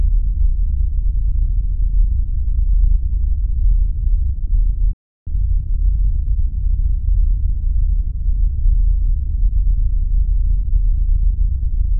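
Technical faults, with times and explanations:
4.93–5.27 s, playback stall: the sound just drops out for about a third of a second, likely because the player ran dry or its thread got blocked.
5.27–7.49 s, time-compressed catch-up: things run about 1.15 times fast at normal pitch while the player trims its backlog, so it feels rushed.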